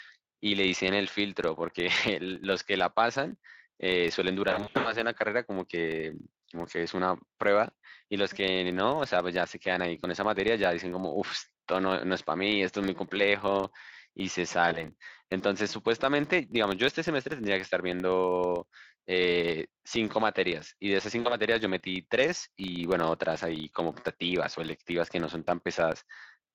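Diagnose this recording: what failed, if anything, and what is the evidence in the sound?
A low buzz at 25 Hz runs through the whole recording, rising and falling with the level of the speech and vanishing in pauses. That points to a filter restarted on every block in the driver or buffer stage. The filter discards its state at each block boundary and starts from silence, so every block opens with a small transient. Ticks every 40 ms fuse into the buzz, which fits a 40 ms processing block.

At three points the speech smears into a fading, buzzy tone or coloured noise and stays weak or rough for a while after: 4.49 to 4.95 s, 14.69 to 14.88 s, and 21.19 to 21.37 s. This is VoIP packet loss concealed by the speech codec, a network fault. The first episode is the worst, with about 240 ms missing in gaps scattered over roughly 360 ms, the longest 80 ms. The later ones lose about 20 ms and 60 ms. 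The Speex decoder, running at 27.8 kbps with light coding damage, filled each gap by extending its last pitch and filter with falling gain. Because each frame builds on the one before, recovery lags the packets' return.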